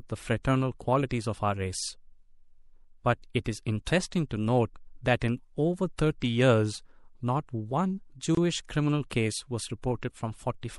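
MP3 compression runs through the whole clip and is plainly audible: the speech has a watery, swirling quality, sibilants turn metallic and chirpy, and consonant onsets blur. This is likely low-bitrate MP3 coding, and the level of damage fits something around 64 kbps. With too few bits, the encoder caps the treble at a fixed cut-off and drops weak spectral lines that flicker in and out between frames.

A gap at a join of encoded pieces opens from 8.35 to 8.37 s, a dropout of about 24 ms cutting into the continuous speech. Its edges are smeared by the codec, and the speech then resumes exactly where it stopped. This happens when separately encoded segments are spliced without trimming, leaving one run's padded final frame and the next run's leading encoder delay as silence in between.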